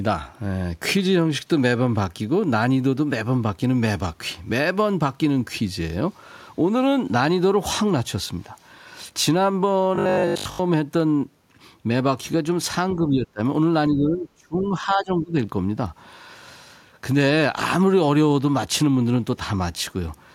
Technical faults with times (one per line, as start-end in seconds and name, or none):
9.95-10.59 robotic sound from repeated short buffers
12.96-13.41 speech suppressed in double talk
13.89-15.35 speech suppressed in double talk
14.60-14.66 other side's voice leaking through